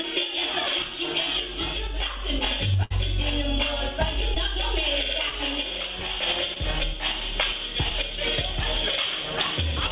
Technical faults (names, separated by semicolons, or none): burst of packet loss; short concealed packet loss